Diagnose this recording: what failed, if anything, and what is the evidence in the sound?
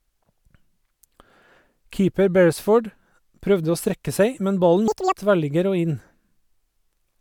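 A sample-format conversion fault: for a stretch of about 0.27 s, from 4.88 to 5.15 s, the audio was read two samples at a time (double speed), just before "tverrligger og". The reader treated each pair of samples as a single frame, as though the stream held two channels or samples twice as wide. The speech in that window plays at 2.0 times speed and an octave up.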